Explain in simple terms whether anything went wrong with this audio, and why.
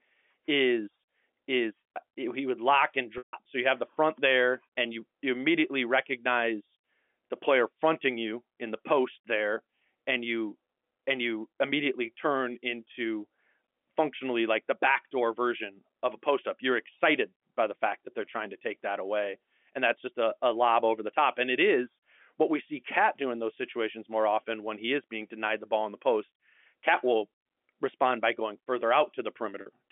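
At 3.18 s, just after "he would lock and", and again at 29.61 s, the speech briefly holds a buzzy tone. This is packet loss with pitch repetition: missing audio was covered by repeating the last sound.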